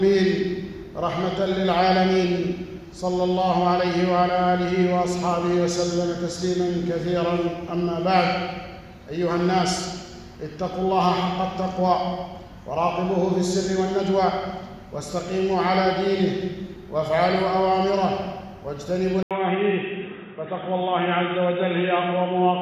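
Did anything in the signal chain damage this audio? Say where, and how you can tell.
Yes. Likely an input switched to a poorer device at the driver, from 19.23 s: an 80 ms gap, then nothing above 3.8 kHz and new background noise.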